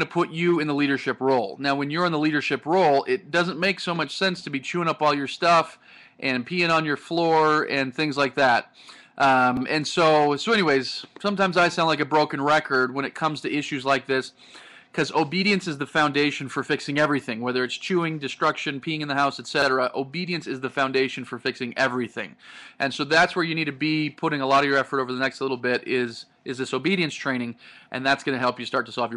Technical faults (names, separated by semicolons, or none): overlapping chunks